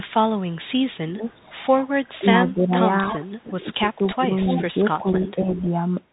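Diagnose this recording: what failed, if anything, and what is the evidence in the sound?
Bluetooth CVSD headset codec, throughout the clip. This is a codec-stage fault. The speech has nothing above 3.8 kHz, a granular hiss runs under it, and sibilants turn scratchy. The damage is plainly audible, consistent with a 64 kbps one-bit delta stream. Each sample only says up or down, with an adapting step size, so loud high-frequency energy outruns the step and distorts. The band limit cuts off everything the microphone path captured above 3.8 kHz.

Speech suppressed in double talk, at 1.1 to 2.73 s, 3.43 to 4.23 s and 4.98 to 5.67 s. This is call processing. The talker's level dips in pieces during these spans, by roughly 20 dB at its deepest in the first, about 15 dB in the second and about 10 dB in the third. The affected stretches add up to well under a second in each span. The likely cause is an echo canceller that could not tell the near talker from loudspeaker echo while both sides spoke, and so turned both down.

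Echo leak, at 3.04 to 3.42 s, 4.05 to 4.63 s and 5.24 to 5.69 s. Also call processing. A delayed copy of the speech arrives 293 ms late. It sits about 15 dB below the speech in the first burst, only about 5 dB below in the second, where it is most obvious, and about 20 dB below in the third. This is likely a far end playing the call on a loudspeaker whose canceller left residual echo in its microphone signal and sent it back.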